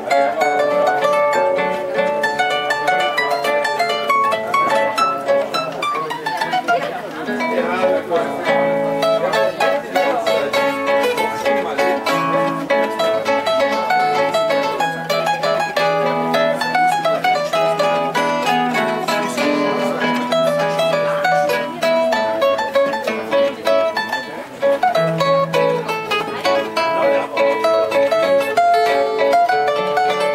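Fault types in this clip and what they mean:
Clock slip clicks: from 0.40 s to 30.18 s, ticks recur about every 0.3 s, roughly a hundred of them. Two unsynchronised clocks drifting apart by around 70 ppm are the likely cause, with one sample dropped or repeated whenever the gap reaches a sample.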